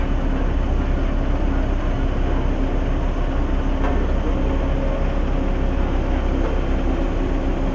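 Nothing goes wrong anywhere in this clip; there's simply no technical fault to point to at any moment.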